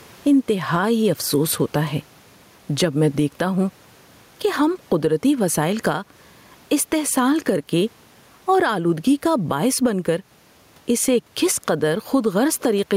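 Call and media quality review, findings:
Gain pumping throughout: gain swinging around 10 dB, speech squashed flat. Likely mic gain set far too high, a fast limiter clamping each peak. Room noise itself about 41 dB below speech.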